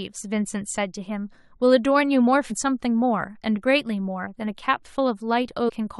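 A brief glitch breaks into the speech at 2.50 s, and a second, slightly longer blip follows from 5.68 to 5.70 s. Both come from damaged data in a compressed stream: corrupted bytes make the decoder misread those frames and lose sync until it locks onto a valid frame header again.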